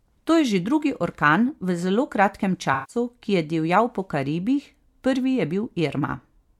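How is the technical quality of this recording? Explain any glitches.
One glitch stands out in the speech. AAC frame loss with concealment occurs from 2.73 to 2.96 s. About 150 ms of coded audio, which fits roughly seven lost frames, went missing, and the decoder patched the gap by extending the last good spectrum. That leaves a smeared, noisy or phasey stretch rather than a clean dropout.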